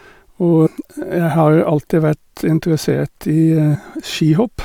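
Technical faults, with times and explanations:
0.65–0.67 s and 3.74–3.76 s, damaged data in a compressed stream: two brief glitches, each about 20 ms, break into the speech. Corrupted bytes made the decoder misread frames and lose sync until it found a valid header.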